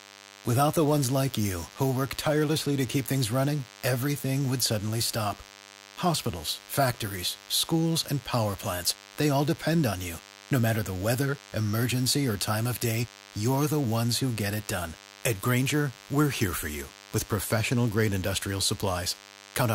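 A steady, thin buzz runs under the speech from start to finish, sitting well below it, about 25 dB down. This is DECT cordless phone buzz: a nearby handset or base station sending a radio burst 100 times a second, which the audio circuitry rectifies into a 100 Hz tone rich in harmonics.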